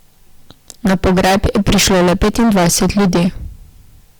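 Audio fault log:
Throughout, hard clipping: the speech is driven about 23 dB past full scale, so roughly a third of samples are sheared flat, giving a harsh, buzzy fuzz on every loud stretch. The abrupt cut-off sets it apart from softer saturation, which rounds peaks more gently.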